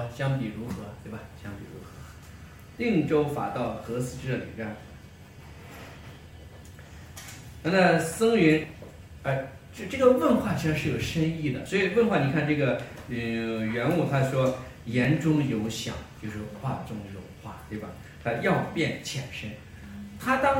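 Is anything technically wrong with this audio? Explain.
Yes. At 0.72, 2.18, 8.64, 9.89, 11.66 and 15.05 s there are six dropped buffers (overrun), likely from samples not being read before the hardware overwrote them. About 20 ms vanishes each time (about 50 ms at 8.64 s), so the audio jumps forward without any gap.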